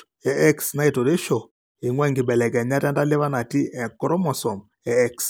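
Nothing in this bit of speech stands out as a technical fault; it just sounds the way it should.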